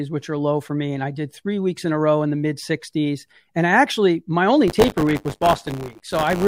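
Speech, with buffer tearing from 4.67 s to the end. A robotic 100 Hz buzz sits on the speech there. The program writing the ring buffer and the hardware reading it have slipped out of step. Each 10 ms period now contains a small slice of audio from about 20 ms earlier, with hard joins on both sides.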